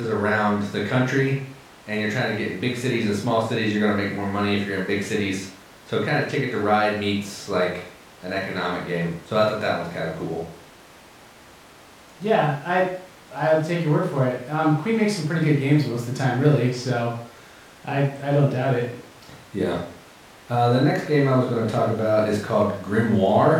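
No audible technical faults anywhere in the speech recording; nothing to flag.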